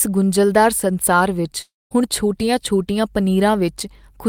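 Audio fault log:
1.61–1.93 s, long network dropout: speech becomes a fading buzz, then 0.21 s of silence, likely from lost packets; unlike a brief glitch, 0.3 s never returns.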